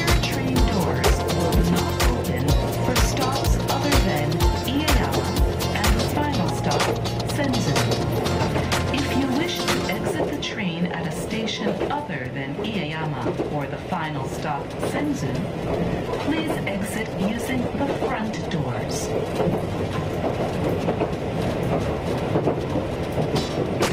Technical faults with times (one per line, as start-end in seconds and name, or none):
15.27-19.92 call bitrate drop